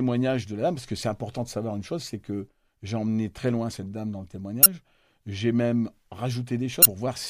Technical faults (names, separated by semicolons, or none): damaged data in a compressed stream